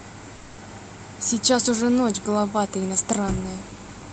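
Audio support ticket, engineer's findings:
Long network dropout, 0.35 to 0.59 s. About 0.22 s of audio never arrives. No hard silence in the gap. The receiver stretches the last sound into a decaying buzz or hiss for roughly 0.22 s, then the audio resumes with that section missing. Likely component is the jitter buffer's loss concealment after a run of lost packets. Carried over an Opus call path where the top end stops near 8 kHz.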